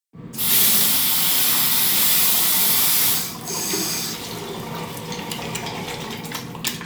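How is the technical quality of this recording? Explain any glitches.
No glitches or dropouts detected.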